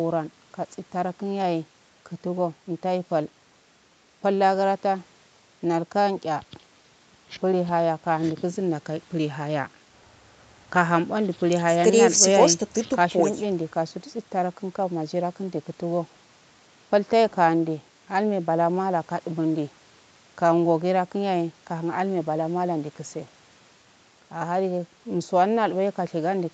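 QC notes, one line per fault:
No faults found in this speech clip. Nothing is heard above 8 kHz, which fits a call path running Opus at 64 kbps with its bandwidth capped at 8 kHz.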